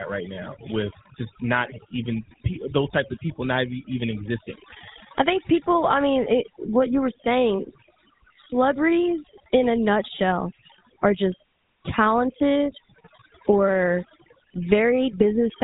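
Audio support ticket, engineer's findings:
Computer activity noise throughout. Buzzy chirping pulses at around 70 Hz, roughly 25 dB below the speech, tracking host load. Likely a ground path shared with the audio interface.

Overdone noise removal throughout. Background dropped and broken up into twinkling specks. Quiet speech components suppressed along with the noise estimate.

GSM full-rate codec throughout. Gravelly, buzzy roughness, plainly audible. Nothing above 3.8 kHz. Pulse-excited vocal-tract model, consistent with a 13 kbps stream.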